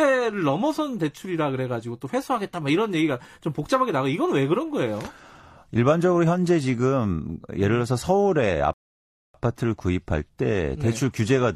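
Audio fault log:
8.73–9.35 s, rebuffering stall: the speech cuts to silence for 0.61 s, then resumes exactly where it stopped. Playback ran out of downloaded audio. Nothing is lost.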